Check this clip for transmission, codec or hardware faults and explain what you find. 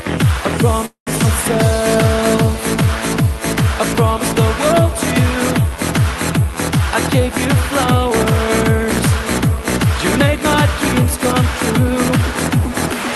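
Two faults stand out. Both come from the call's transmission, heard through an Opus-style codec with audio content up to about 12 kHz.

Call audio freeze, 0.85 to 1.09 s. The sound stalls for about 212 ms. It continues as a fading buzz or hiss and then falls silent for about 110 ms. It resumes where it stopped, with nothing lost. Packets were likely held up, so the jitter buffer ran empty.

Jitter buffer speed-up, 7.20 to 9.86 s. The audio runs about 3% fast at unchanged pitch. The receiver trimmed roughly 70 ms in small pitch-period slices to reduce a backlog of buffered audio.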